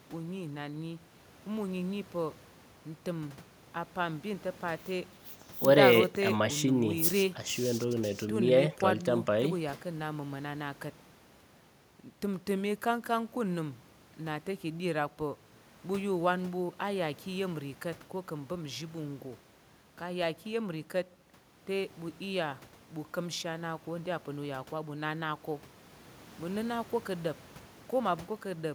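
Listening through the speech recording, nothing stood out as a technical problem at any point.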